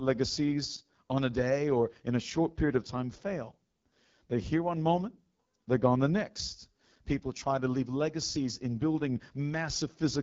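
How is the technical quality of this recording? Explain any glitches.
The recording is compromised by plainly audible codec damage from start to finish. It sounds like AMR wideband (HD Voice) coding at one of its lowest rates, which fits 8.85 kbit/s. The codec models the vocal tract and drives it with sparse pulses below 6.4 kHz. Above that it only adds shaped noise up to 7 kHz. At this low rate the pulse excitation is coarse. The speech therefore turns rough and raspy throughout, with a gritty edge.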